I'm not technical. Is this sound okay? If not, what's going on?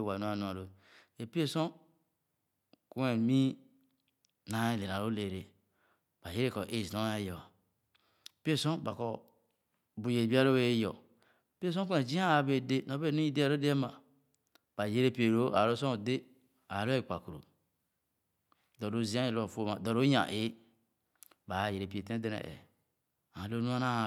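Yes, nothing in this speech recording points to a technical fault.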